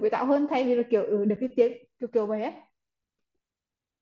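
At 1.36 s there's an abrupt 7.5 ms hole in the speech. That's unconcealed Bluetooth headset packet loss, which fits one dropped packet left as bare silence.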